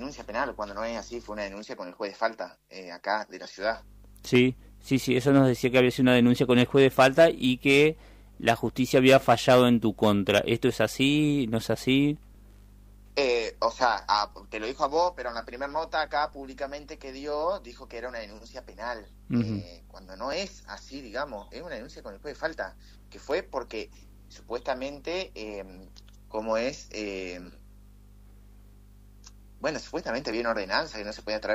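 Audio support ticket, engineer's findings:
Overlap between stream segments: clicks/skips at 4.35, 12.35, 16.33, 20.33, 30.32 s. A few ms cut at 2 s segment joins, so the waveform jumps without a silent gap.

Periodic USB or driver dropouts: ticks every 0.5 s, 22.81–24.81 s. Tiny silence gaps well under 1 ms from a bus or driver stall. Tight regular burst, unlike the sparse segment-join cuts.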